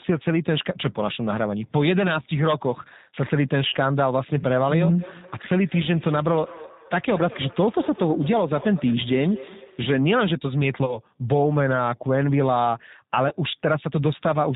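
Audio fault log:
throughout G.729 codec: The speech comes through rough and faintly synthetic, with nothing above 4 kHz. The 8 kbit/s coder rebuilds each 10 ms frame from a vocal tract filter, a pitch predictor and a few pulses, so fine detail and upper harmonics are lost.
3.68–3.76 s, 10.86–10.99 s, 13.29–13.35 s VoIP packet loss concealed by the speech codec: About 40 ms of audio drops out at the first point and about 20 ms at the others. The decoder fills each gap by stretching its last pitch and filter into a fading buzzy tone or coloured noise. Because each frame builds on the previous one, the sound stays weak for a while after the audio returns.
4.99–10.02 s feedback echo between two devices: The speech comes back at a regular interval of roughly a fifth of a second, at about 16 dB below the direct sound at its loudest. Each repeat is thinner and more ringing than the last. Two devices in the same room are on one call, and one device's loudspeaker feeds the other's microphone. 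Each echo canceller only removes its own device's playback, so the loop keeps going.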